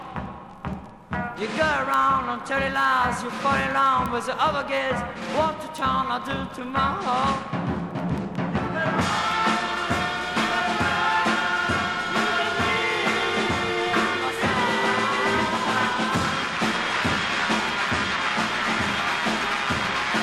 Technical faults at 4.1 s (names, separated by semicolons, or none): bit error spike